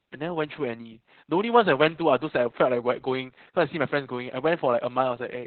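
Heavy Opus voice compression runs throughout: the coder has narrowed the band, leaving nothing above 4.2 kHz, so the speech sounds muffled, hoarse and faintly robotic, consistent with about 8 kbps.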